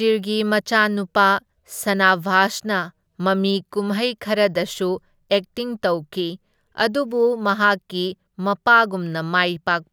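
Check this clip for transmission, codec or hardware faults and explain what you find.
One fault runs through the whole speech clip: a resampler restarted on every block. The conversion, which points to 48 kHz being taken down to 44.1 kHz, processes 10 ms blocks separately. Each block edge lacks its true neighbouring samples and carries a small error. Those errors repeat at 100 Hz, giving a low buzz heard only while signal is present.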